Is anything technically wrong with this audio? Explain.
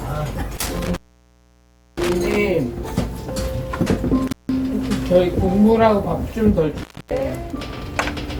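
Yes. An intermittent contact, a loose cable or plug briefly opening, cuts the sound out with crackle at each edge, leaving faint hiss during the gaps: about 1.01 s from 0.57 s, 0.17 s from 4.28 s, and 0.27 s from 6.77 s.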